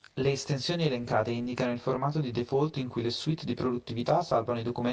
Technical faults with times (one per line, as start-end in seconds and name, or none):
0.00-4.92 channel delay (comb filtering)